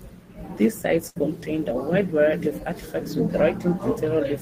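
At 1.09 s the speech stops moving forward. For roughly 60 ms the last sound before the break is stretched into a held, steadily fading sound. At 1.17 s the speech picks up again slightly further on, and about 60 ms of it is simply missing. This is a burst of packet loss: a short run of audio packets never arrived in time. The receiver bridged the gap by extending and fading the last good sound, then jumped ahead when fresh packets came in.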